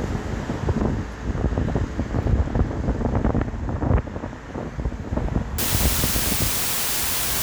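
From 5.58 s to the end at 7.42 s, the audio is reduced to about 3 bits, with dither added before each sample is rounded. So few levels leave a large rounding error, and the dither turns that error into steady white noise rather than distortion. The result is a constant, even hiss that sits at roughly the same level as the sound itself, so it is heard as a strong wash, not a faint background.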